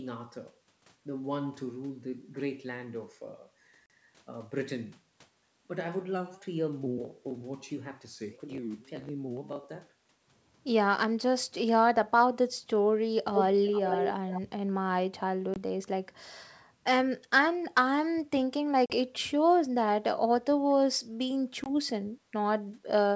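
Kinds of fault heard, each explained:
Packet loss on an ADPCM call: short gaps of silence with hard edges appear at 3.86, 15.54, 18.86 and 21.64 s, each 20 to 40 ms long. After each gap the decoder's predictor and step size no longer match the sender's, so the speech comes back slightly distorted, and settles within tens of milliseconds.
Echo leak: from 13.34 to 14.41 s a delayed copy of the speech follows about 458 ms behind, only around 5 dB quieter. This is likely a loudspeaker on one side whose echo canceller left part of the pickup in place, so that leftover was sent back down the call.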